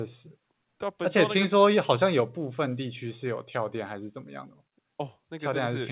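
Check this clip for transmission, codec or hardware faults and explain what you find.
Nothing here points to a transmission, codec or hardware fault; the speech sounds like it came over an ordinary call line, and with nothing above 4 kHz it has the familiar narrowband telephone quality of G.711 mu-law.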